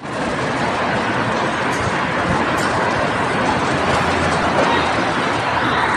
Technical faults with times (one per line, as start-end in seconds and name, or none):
4.40-4.43 broken MP3 bit reservoir